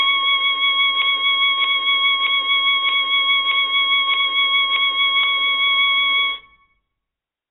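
From the start the music is dull and smeared, with a warbling, fizzy texture typical of AAC compression. Nothing sounds above 3.9 kHz, most likely from heavy AAC-LC coding at a bitrate around 16 kbps. A spectrogram shows a flat ceiling at 3.9 kHz and patchy holes below it.

From 1.02 s to 5.24 s a broken-record loop repeats one 0.62 s fragment seven times back to back, likely from a stalled player or stream re-sending its last buffer. The audio due in that span is lost, and the waveform shows identical blocks in a row.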